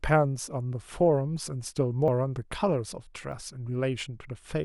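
At 2.08 s the speech jumps, and a short stretch of sound seems to vanish, roughly 70 ms. At 3.32 s it happens again, with a smaller skip of about 40 ms. There is no gap of silence either time. The audio simply lurches forward. The likely cause is a dropped buffer (overrun): samples were overwritten before the program read them, so the surviving edges were butted together.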